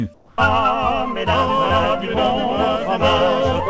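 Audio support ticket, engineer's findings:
Comfort noise in place of the background, 0.14 to 0.38 s (240 ms). Real background, about 30 dB below the loud parts, gives way to flat, detail-free hiss, about 5 dB quieter. Likely DTX on the sending side: the voice detector judged the pause silent and the receiver synthesised noise instead. Spectrogram shows a smooth, uniform noise block under the 8 kHz ceiling of the G.722 path. On the waveform, the noise floor steps down.

Onset clipped by the voice detector, 0.36 to 0.38 s (20 ms). Sound returns abruptly, with its soft attack missing. The likely cause is slow VAD re-trigger: the opening 20 ms weren't transmitted and comfort noise covered them. On the waveform, the envelope jumps from the noise floor to full level with no ramp. The spectrogram shows a hard vertical edge where the comfort-noise block ends.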